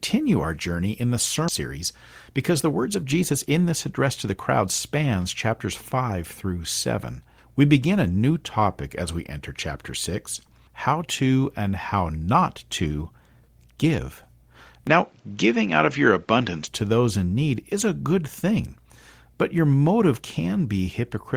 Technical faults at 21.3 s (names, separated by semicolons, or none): none